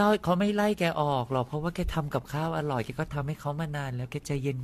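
Throughout, generation loss: repeated lossy re-encoding, likely about five passes, leaves the speech swirly and hollow, with blurred attacks and nothing above 14 kHz.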